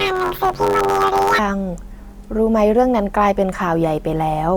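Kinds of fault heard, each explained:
Planar audio read as interleaved, 0.0 to 1.39 s: the speech is stored as blocks holding all of one channel's samples followed by all of the other's, but it is read as alternating left-right pairs. Each 10.67 ms block, which fits a 512-sample block, is therefore played twice at double speed, once per channel, and the overall pace holds. Because the blocks are this short, no clear octave jump comes through; instead the opening speech takes on a robotic buzz at about 94 Hz, the block rate.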